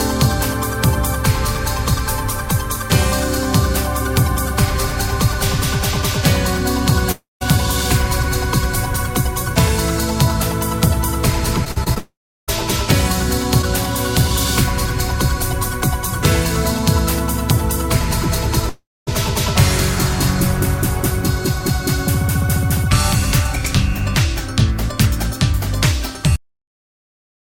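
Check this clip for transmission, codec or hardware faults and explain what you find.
Three kinds of fault are present: three long network dropouts, a burst of repeated packet loss, and a cut-off end.

Long network dropout, at 7.11–7.43 s, 11.98–12.50 s and 18.69–19.09 s: these are likely network dropouts, where the receiver stopped getting audio for about 300, 500 and 380 ms respectively. Each time, concealment stretches the last sound into a fading buzz, then leaves near-silence for about 170, 340 and 220 ms before audio resumes with that stretch missing.

Repeated packet loss (robotic sound), 11.65–11.98 s: four gaps occurred in quick succession, about 100 ms in total, the longest gap 39 ms. Each hole is patched by extending the preceding sound, so roughly 28% of this span is synthetic fill. The result is choppy, with pieces missing, and it runs directly into the 500 ms dropout that starts at 11.98 s.

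Cut-off end, at 26.36 s: the final buffers were never written out, so playback halts in the middle of a sound. The audio drops straight to digital silence with no natural decay, and that silence holds until the clip finishes.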